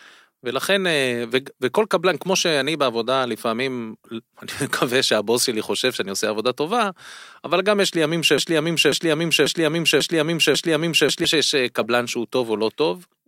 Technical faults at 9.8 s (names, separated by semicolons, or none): broken-record loop